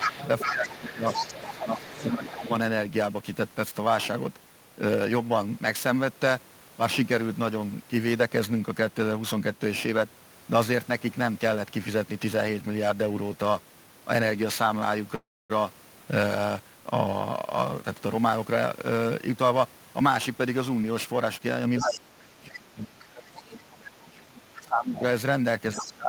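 All the way through there's periodic clock jitter: something is wobbling the converter clock at around 2 kHz, which puts sidebands that far either side of everything. You hear it as a metallic, gritty edge on the speech, worst on bright consonants, and gone in the pauses.

Right from the start, 0.02 to 2.51 s, the other side's voice is leaking through at only about 5 dB below the talker. It's most likely loudspeaker echo the canceller didn't fully remove. Over the same stretch, 0 to 2.44 s, the talker gets speech suppressed in double talk, most likely the canceller ducking everything because it couldn't separate the two voices. That adds up to about a second and a half of dips, up to roughly 15 dB deep, with the local voice sounding pulled back and patchy.

At 15.15 to 15.52 s there's a call audio freeze, likely packets held up until the jitter buffer ran dry. The last sound gets stretched into a short fading buzz, then about 260 ms of silence, 343 ms filled in all. 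Nothing is lost; the speech just picks up where it stopped, a beat late.

From 17.52 to 21.67 s the jitter buffer speed-up kicks in. The receiver is trimming small pitch-period chunks to claw back that delay, about 300 ms in total. Speech runs at roughly 108% speed with the pitch unchanged, so it sounds slightly rushed.

Near the end the echo problem returns. The other side's voice leaks through from 21.78 to 23.61 s and again from 24.95 to 26.09 s, about 10 dB under the talker, likely from the same incomplete cancellation. Meanwhile, from 21.81 s to the end, the talker is suppressed in double talk again, this time harder, with drops of about 25 dB. The local voice keeps ducking away, losing level and top end, while the other side is talking.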